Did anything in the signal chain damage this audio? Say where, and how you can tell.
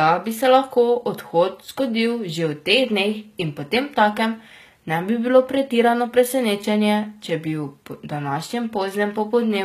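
Yes, at the codec stage, likely HE-AAC at a low bitrate, around 20 kbps by the sound. Throughout the speech, treble is rebuilt by band replication rather than coded, so sibilants turn gritty and lispy, with nothing above 14.9 kHz.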